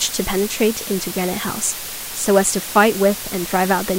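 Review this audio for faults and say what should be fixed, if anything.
A steady, even hiss runs under the speech from start to finish. This is low bit depth with dither. The hiss points to about 5 bits. Dither added before rounding turns the error into constant white noise, not distortion. The hiss sits only about 10 dB below the speech. Keep at least 16 bits at every stage and apply dither only at the final export.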